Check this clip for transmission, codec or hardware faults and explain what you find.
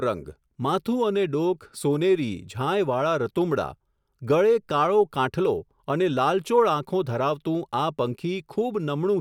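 No faults can be heard anywhere in the recording.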